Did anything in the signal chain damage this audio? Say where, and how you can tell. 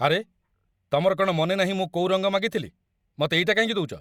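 No, nothing in the chain did.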